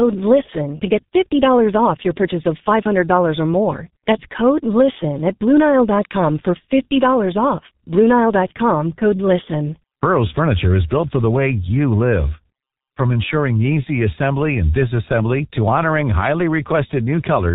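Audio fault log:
throughout, G.723.1 codec: the speech is muffled and hoarse, with smeared consonants and nothing above 4 kHz. The heavy damage fits a 6.3 kbit/s stream coded in 30 ms frames, where the slowly updated voice model cannot follow quick changes, blurring onsets and roughening vowels.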